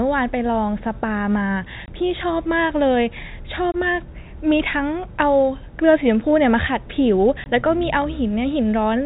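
Speech carried over a G.711 telephone path, band-limited to below 4 kHz, with packet loss filled with silence at 1.86–1.88 s, 3.72–3.74 s and 7.44–7.46 s. Each hole lasts 20 ms, which fits a single lost 20 ms packet. The receiver substituted silence instead of concealing the gap, so the speech cuts out abruptly, with hard edges on either side of each dropout.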